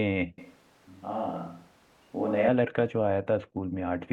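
From 0.38 to 2.48 s the speech abruptly turns roomy and hollow, losing its low end, with background noise sitting roughly 30 dB below it, then snaps back. The likely cause is a switch to a distant microphone after the close one dropped out.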